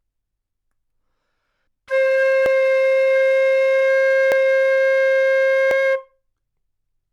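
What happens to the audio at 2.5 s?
At 2.46 s the audio jumps ahead. Roughly 50 ms of sound is missing, with no gap of silence. This is likely a dropped buffer (overrun). The samples were overwritten before being read, so the two sides meet directly.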